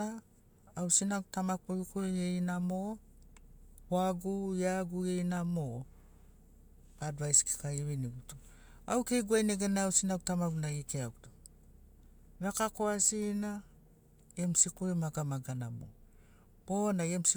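A stretch of speech with nothing technically amiss anywhere in it, so there's really nothing here to flag.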